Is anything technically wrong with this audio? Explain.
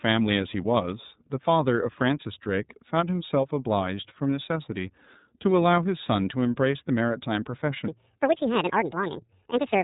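Yes, there are two faults.

The iLBC codec affects the whole clip. Nothing above about 3.8 kHz survives, and the speech has a rough, slightly synthetic texture. Each frame's excitation is coded on its own, which fits 30 ms frames in iLBC's 13.33 kbps mode. The result is narrowband and plainly degraded.

A section at the wrong speed runs from 7.88 s to the end at 9.84 s. That stretch plays 1.7 times too fast, so the speech turns hurried and rises by most of an octave. The likely cause is an editor or player applying the wrong clock to that segment.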